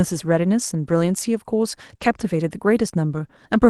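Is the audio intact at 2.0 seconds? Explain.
No. Just before 2.0 seconds, from 1.97 to 2.00 s, there is a brief smear where the sound seems to hang on itself, and a short consonant could drop out. This is a short concealed packet loss. About 20 ms of audio arrived too late for the decoder, and the receiver covered the hole by extending the preceding sound, from its pitch if voiced or as shaped noise if not, before blending back into the real signal.

From 2.00 to 2.06 s the sound turns grainier and noisier for about 40 ms, with no gap. This is a lost packet rebuilt from error correction. The span fits two lost 20 ms frames that the Opus decoder replaced with the low-bitrate backup copies carried in the following packets. Those copies hold less detail than the originals, which gives the rough, hissy texture.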